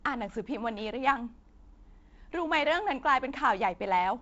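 Nothing here counts as a fault, really: the speech comes over G.722 wideband telephone coding, with nothing above 7.7 kHz and the light extra noise in the lower band that fits a 48 kbit/s link, which is just how that channel is meant to sound.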